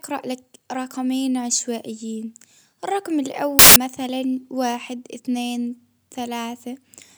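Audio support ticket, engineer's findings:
Samples built from the wrong bytes, 3.59–3.76 s: burst of loud, harsh broadband noise replacing the speech. Decoder/reader assembling sample bytes misaligned or swapped, so low bits dominate. Spectrogram: full-band wash; waveform: dense block.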